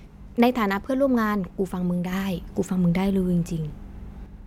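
At 2.12 s a sudden gain jump lifts the speech and background noise together by about 5 dB until 4.26 s, likely from gain applied without a ramp.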